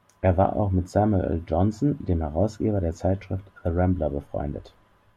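No technical faults are audible anywhere in this speech recording.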